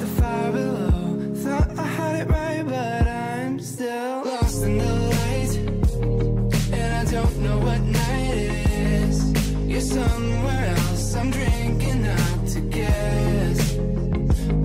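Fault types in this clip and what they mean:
No faults can be heard anywhere in this recording.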